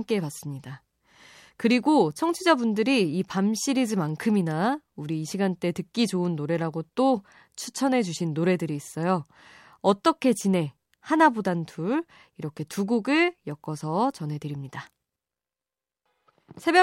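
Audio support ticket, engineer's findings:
Listened through the whole speech clip and found nothing wrong, so there's no fault to log on this one.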